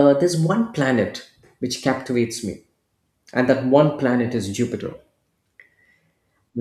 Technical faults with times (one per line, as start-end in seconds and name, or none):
none